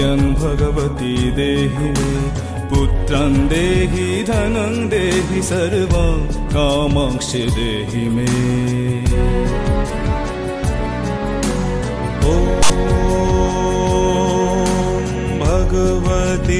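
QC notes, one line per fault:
12.63–12.70 s, file tags played as audio: text tag bytes decoded as samples give a brief, hard-edged rasp offset to one side, unlike random noise.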